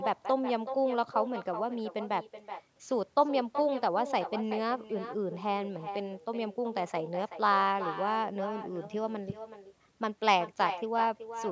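Throughout the speech, an echo with no canceller returns each phrase about 0.4 s later, about 10 dB quieter and thin, looped back from the far-end loudspeaker.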